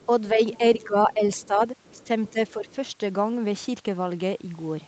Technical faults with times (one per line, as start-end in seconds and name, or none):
0.00-0.06 other side's voice leaking through
0.06-1.60 speech suppressed in double talk
0.53-0.58 other side's voice leaking through
1.11-1.47 other side's voice leaking through
1.85-2.75 other side's voice leaking through
1.95-2.67 speech suppressed in double talk